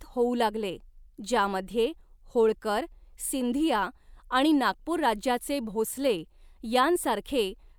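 No faults audible anywhere in the speech recording; nothing to flag.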